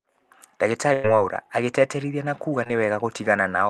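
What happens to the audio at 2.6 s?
Between 2.64 and 2.67 s the speech briefly smears, a short wobbly blur where the sound seems stretched rather than cleanly spoken. This is short concealed packet loss: about 20 ms of the call's audio arrived too late for the decoder. The receiver covered the gap by extending the preceding sound, synthesising roughly 16 ms of continuation from its pitch or as shaped noise, then crossfading back into the real signal as it resumed.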